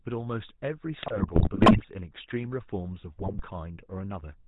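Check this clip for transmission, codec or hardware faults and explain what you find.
Two problems here: the whole speech clip has been through a GSM codec, and the signal gets corrupted twice.

Throughout, the GSM full-rate codec shows. Pulse-driven vocal-tract modelling and a 4 kHz ceiling give that buzzy, gravelly roughness, which fits roughly 13 kbps.

From 1.02 to 1.85 s and again from 3.18 to 3.42 s, GSM bit errors hit. Corrupted filter, pitch and gain values make the speech squawk, pop and gargle.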